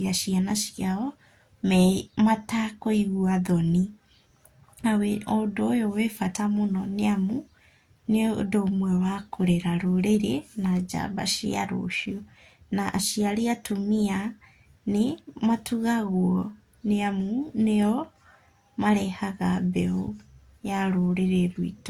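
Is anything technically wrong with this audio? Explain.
Yes. Throughout the speech, the band stops at about 20.2 kHz, with two different sets of codec artefacts layered together. This is likely transcoding between lossy codecs, consistent with HE-AAC followed by Opus, each near 48 kbit/s. The second encoder spends bits on the first one's artefacts while adding its own.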